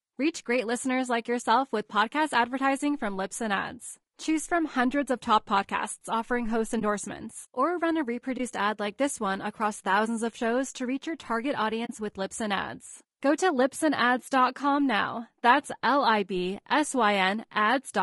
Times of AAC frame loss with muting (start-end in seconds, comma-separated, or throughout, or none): 6.79-6.82, 8.37-8.40, 11.85-11.91